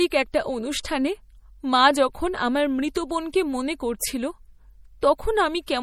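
Throughout, the speech has a watery, swirly quality, likely from MP3 compression at a low bitrate around 48 kbps. On a spectrogram, weak high-frequency lines flicker on and off between frames, with nothing above 20.2 kHz.

Pre-echo occurs at 0.83 s, at 2.94 s just after "মা যখন আমার", at 3.99 s, and at 5.01 s. Quantisation noise smears backward before each sharp onset, adding a brief hiss of 14 to 18 ms. It shows as broadband haze just ahead of each attack in the waveform.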